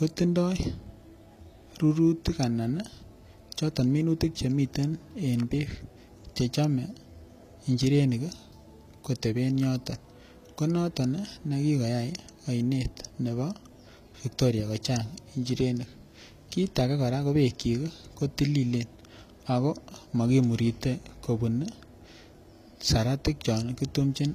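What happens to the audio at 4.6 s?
At 4.6 s the speech carries HE-AAC compression, likely from a low-bitrate encode near 24 kbps: replicated treble sounds gritty and metallic, with nothing above 14.9 kHz.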